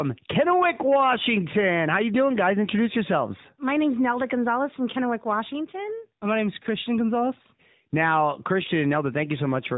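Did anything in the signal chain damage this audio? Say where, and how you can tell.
Yes, at the codec stage: the speech has gone through the AMR narrowband mobile codec for the whole clip. Nothing above 4 kHz survives, and the call's microphone processing only trimmed the lowest bass, which is normal. The voice also has a plainly audible buzzy, synthetic texture, which fits AMR-NB at a mid-rate mode of about 10.2 kbps. A plain 8 kHz resample or low-pass filter would sound dull but clean. This sound is rebuilt from a vocal-tract model driven by sparse pulses.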